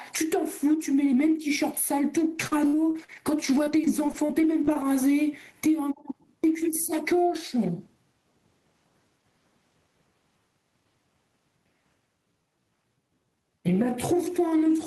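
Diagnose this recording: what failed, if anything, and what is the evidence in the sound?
Gain pumping runs through the whole recording. The swing is around 20 dB, so loud and quiet passages sit unnaturally close in level and the speech sounds squashed. The stage is the analogue input and call processing. The likely cause is microphone gain set far too high, with a fast limiter or compressor clamping each peak.

Repeated packet loss, heard as robotic sound, hits the network stage from 2.35 to 4.90 s. A dozen dropouts fall across that span. The longest is about 59 ms, and together they remove about 360 ms of audio. The receiver patches each hole by extending the last sound, roughly half a second of rebuilt audio in total. The speech therefore turns choppy, with fragments missing.

A time-stretched section starts at 12.18 s and runs to the end at 14.87 s. The pace drops to 0.712 times normal speed, but the pitch stays put. 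That combination points to a pitch-preserving stretch, which repeats short slices of the waveform to fill the extra time. This is likely playback or storage software padding the audio to a target length.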